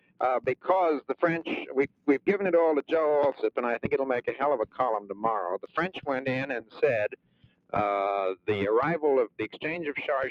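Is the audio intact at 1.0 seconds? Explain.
No. From 1.01 to 1.16 s the sound sinks abruptly, dropping by about 20 dB for roughly 150 ms before recovering. This is sound cut by the noise suppressor: it mistook this stretch for noise and pulled it down harder than its surroundings.

Around that moment the level also pumps and thins, with held and fading parts sagging while sharper onsets survive, swinging by around 20 dB. This is a noise suppressor applied to music or sounds, a speech-tuned processor treating steady material as noise.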